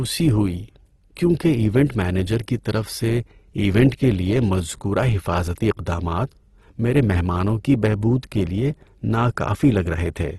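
Opus compression runs throughout the speech: nothing remains above 12.3 kHz, and the sound is grainy and rough rather than swirly, likely from Opus music mode filling starved bands with folded or noise content, which fits a low bitrate near 16 kbps.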